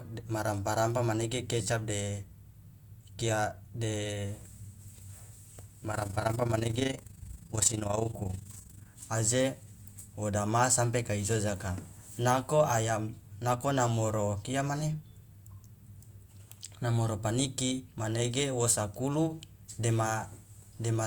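Overlap-add ripple runs from 5.92 to 8.88 s. The speech was split into windowed frames and rebuilt with an overlap whose windows fail to sum to a steady gain, so the level dips and recovers once per frame, by about 11 dB, at around 30 times a second. That periodic gain swing is heard as a fast, rough flutter laid over the speech, a rough tremolo that stops once the passage ends.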